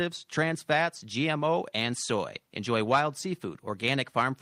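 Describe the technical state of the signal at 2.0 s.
At 2.0 s the speech signal is intact, with no audible fault at that moment.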